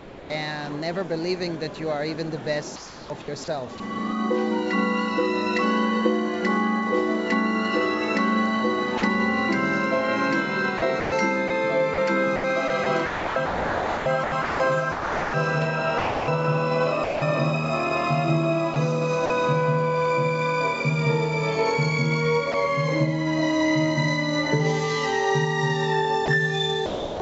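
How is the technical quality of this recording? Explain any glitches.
The recording has repeated gaps where the sound is swapped for synthetic background noise. It passed through a call path with nothing above 8 kHz, which fits a G.722 call codec at about 64 kbps.

Sound dropped by the voice detector occurs three times: 0.00 to 0.30 s, 8.98 to 9.02 s, and 22.52 to 22.54 s. The sound gives way to steady noise, then returns. The likely cause is the sender's voice detector judging the sound to be background and pausing transmission. The receiver fills the gap with comfort noise. The opening loses about 240 ms. The later two lose 40 ms and 20 ms.

Sound chopped by the voice detector affects four stretches: 2.76 to 3.80 s, 10.78 to 17.22 s, 18.74 to 19.30 s, and 26.26 to 27.20 s. Here the sending switches on and off more than once. The result is choppy, with holes in the sound. The likely cause is a detector wavering near its threshold, with comfort noise patched in each time. 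About 2.4 s is replaced in the long middle stretch. The others lose 460 ms, 60 ms and 360 ms.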